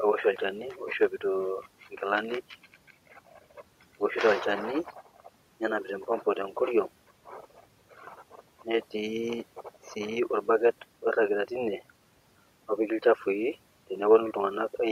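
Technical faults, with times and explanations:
Throughout, overdone noise removal: bands near the noise floor are pushed far down, leaving twinkling near-silence instead of steady background hiss.
7.91 to 8.4 s, speech cut by the noise suppressor: quiet speech is mistaken for noise and dips by up to about 9 dB, sounding swallowed rather than watery.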